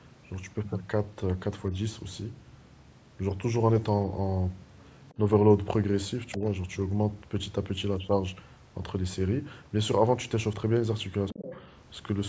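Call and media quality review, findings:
Other side's voice leaking through at 5.09–5.14 s (very faint), 6.32–6.38 s and 11.29–11.61 s (roughly 15 dB under the talker). Far-end playback reaching the mic, likely from incomplete echo cancellation.

Speech suppressed in double talk at 6.37–6.41 s (roughly 10 dB dip) and 11.31–11.61 s (roughly 20 dB dip). Talker's level drops while the far end is audible, likely from the echo canceller attenuating both sides at once.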